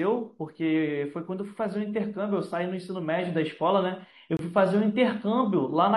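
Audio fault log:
4.37–4.39 s, gap between stream segments: a 23 ms hard-edged silent hole in the speech, where mismatched segment time stamps leave space the player fills with silence.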